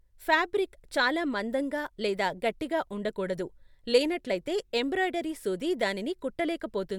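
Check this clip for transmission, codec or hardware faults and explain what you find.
No transmission, codec or hardware fault is audible anywhere in this speech recording.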